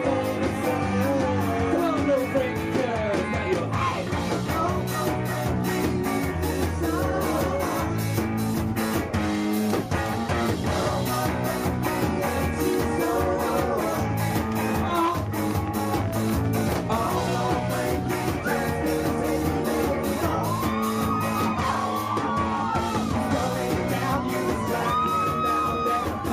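A train of clicks runs from 14.71 to 16.62 s: roughly thirty similar pulses at an uneven pace, about 13.7 per second, peaking around 5 dB above the sound. It is heard as irregular popping, and is likely caused by interference or a faulty connection or power supply.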